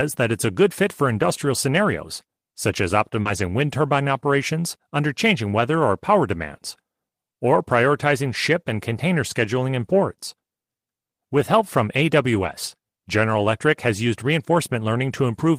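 At 1.13 to 1.31 s the speech goes rough and a bit noisy for about 100 ms. That's a lost packet rebuilt from error correction. A run of packets, around five going by the length, didn't arrive, but the packets that followed carried low-bitrate copies of them, and the decoder played those instead. So nothing drops out; it just gets grainier. The same thing happens three more times: 3.25 to 3.39 s (about 80 ms), a tiny 20 ms patch at 11.37 to 11.39 s, and the longest at 12.31 to 12.53 s (about 120 ms).

Tucked in right before the second of those, at 3.21 to 3.27 s, is a short concealed packet loss. About 40 ms never showed up in time and had no backup copy, so the receiver made up that stretch by carrying on the last bit of sound, stretching its pitch if it was voiced or filling with shaped noise if not, and then blending back into the real audio. You hear it as a quick smear or wobble, which runs straight into the rougher rebuilt section that follows.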